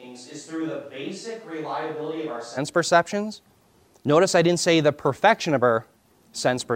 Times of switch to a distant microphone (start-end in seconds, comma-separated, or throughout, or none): 0.00-2.56